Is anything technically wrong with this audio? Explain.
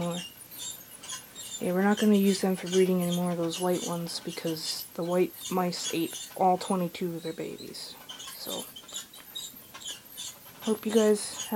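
Yes, there are two faults. Throughout, low bit depth with dither leaves a steady, even hiss roughly 25 dB below the sound. Eight-bit rounding is randomised into white noise, so there is no grainy distortion.

From 8.25 to 9.93 s, speed rises 5.33% and pitch about 90 cents, then snaps back, likely a drift correction step. Unlike gradual wow, the change is abrupt and holds steady.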